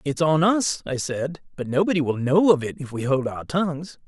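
No technical faults can be heard anywhere in the speech. There is nothing in the recording that calls for a timestamp or an explanation.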